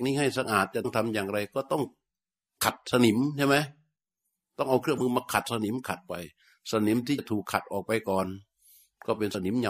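Brief skips, with the speech lurching forward, are heard at 0.84 s, 2.60 to 2.63 s, 4.95 to 5.01 s, 7.18 s and 9.31 to 9.35 s. These are compressed frames skipped: missing or rejected frames drop roughly 20 to 100 ms of speech, and the audio jumps ahead at each join.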